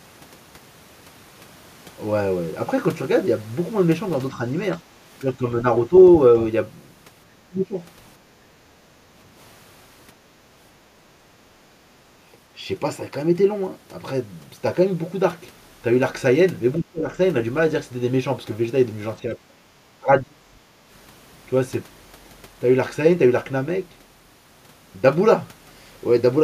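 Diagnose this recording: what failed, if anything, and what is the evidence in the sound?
Speech suppressed in double talk, at the call-processing stage: the speech dips at 4.32–4.41, 5.21–5.66, 5.89–5.93, 7.24–7.78, 16.79–17.11, 19.25–19.67 and 19.97–20.5 s, ranging from slight dips to roughly 30 dB down. The echo canceller likely mistook overlapping far-end audio for echo and attenuated the near talker along with it.

Background gated by the echo canceller, also in call processing: from 8.62 to 9.17 s the room sound falls by about 8 dB, then recovers. The canceller's suppressor clamped the microphone path while the loudspeaker was playing and then released it.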